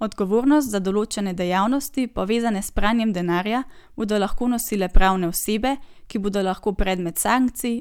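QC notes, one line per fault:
No faults found on the speech; nothing to log.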